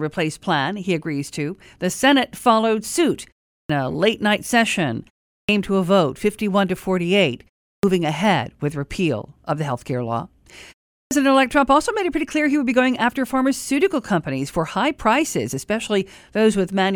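At 3.58, 5.39, 7.73 and 11.0 s, speech resumes after a pause of about a third of a second with a clipped start after a pause: the output device has dropped idle and needs roughly 0.1 s (96 to 115 ms) to wake, so each onset is swallowed and the sound begins abruptly. On a waveform, silence jumps straight to speech level with no rise. A spectrogram shows energy starting with a hard vertical edge, missing its opening.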